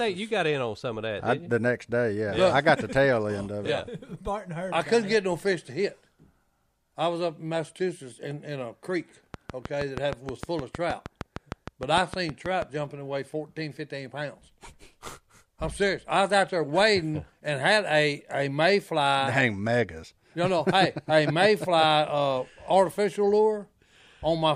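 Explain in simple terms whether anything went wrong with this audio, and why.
From 9.34 to 12.63 s, a train of clicks ticks evenly about 6.4 times a second, about twenty similar pops, likely from nearby equipment interference, unlike random crackle.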